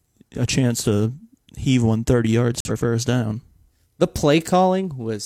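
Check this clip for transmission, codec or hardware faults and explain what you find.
There's one clear fault in this speech clip, a corrupt frame muted from 2.60 to 2.71 s. Some bits in a compressed frame got flipped, the decoder rejected it, and the player filled the slot with silence. You hear about 100 ms of dead air that cuts in abruptly, which fits a single lost frame. Timing stays intact, so the speech carries on at the right point afterwards.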